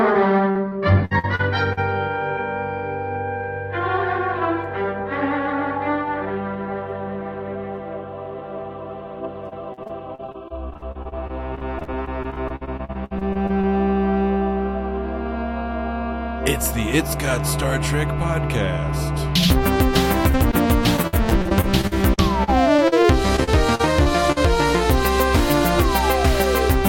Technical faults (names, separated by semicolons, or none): repeated packet loss (robotic sound); short concealed packet loss